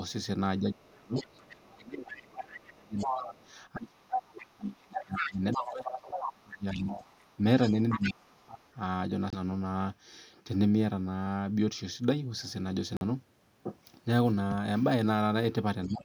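From 0.59 to 7.05 s the speech is repeatedly pushed down by up to about 30 dB, roughly five seconds in all. This is speech suppressed in double talk, likely an echo canceller ducking everything while both ends spoke. The voice dips, dulls or cuts out in pieces.

A second voice leaks through at the same time, from the other side: faintly, about 15 dB down, at 1.15 to 1.58 s, then strongly, only about 5 dB below the speech, from 2.17 to 3.52 s and 4.16 to 8.71 s. The canceller likely left this loudspeaker echo unremoved. It is a separate talker layered on top, not a smearing of the main speech.

The suppression returns from 7.94 to 8.63 s, again about 30 dB deep, and briefly at 15.86 s to the end, about 20 dB.

At 9.30 s and 12.97 s the sound cuts to dead silence for 25 ms and 44 ms, then resumes. These are Bluetooth stalls, likely from the headphone buffer running dry. They are abrupt, complete gaps with no gradual fade and no second voice present.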